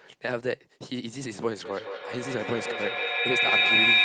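From 1.65 s a shrill tone around 2 kHz rises out of the speech, the loop repeating roughly every 150 ms, and peaks about 8 dB louder than the talker. It persists to the end of the clip. This is feedback howl: two devices in the same room are on one call, and each pass from loudspeaker back into microphone adds level. The repeats therefore swell rather than decay and narrow onto the frequency the loop favours. That repeat interval is the loop's delay.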